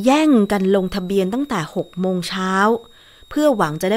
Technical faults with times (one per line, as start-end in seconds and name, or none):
0.00-3.97 switching supply whistle